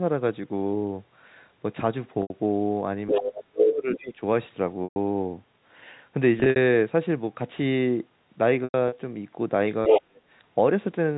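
A speech recording carrying three kinds of call fault. Packet loss with pitch repetition bridges gaps at 2.22 s (80 ms), 4.84 s (120 ms), 6.40 s (100 ms lost, scattered over 160 ms) and 8.64 s (140 ms lost over 280 ms). Each sounds like a briefly held, buzzy pitch that fades away. The other side's voice leaks through from 3.07 to 3.42 s at about the talker's own level, again around 3.95 to 4.02 s about 15 dB lower, and from 9.87 to 10.02 s about 5 dB louder. This is foreign speech, likely loudspeaker echo the canceller missed, not a smearing of the talker. Speech is suppressed in double talk from 3.09 to 4.21 s, dropping as much as roughly 30 dB, and from 9.88 to 10.23 s by roughly 35 dB. The talker's level drops while the far side's sound is playing. This points to an echo canceller likely ducking both sides, unlike the tonal hold of a lost packet.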